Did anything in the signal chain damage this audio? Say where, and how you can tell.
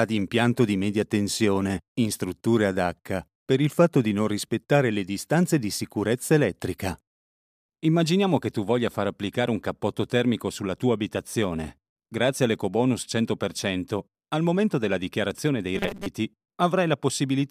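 Yes: robotic sound from repeated short buffers at 15.76 to 16.06 s. The audio turns into a rigid buzz near 200 Hz, which fits a 5 ms segment being replayed, likely a starved driver buffer repeating old audio for about half that span.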